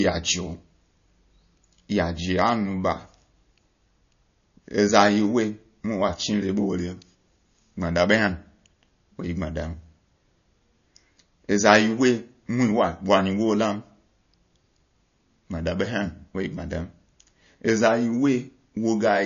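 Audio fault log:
Throughout: MP3 compression, likely. Nothing in the speech reaches above 6.9 kHz, so the sibilance and air are missing and the top sounds dull. The codec damage is plainly audible. A starved encoder cuts the treble at a fixed point and drops weak frequency lines that flicker on and off between frames, which gives the sound its watery, swirly texture. The damage level fits a low bitrate of around 35 kbps.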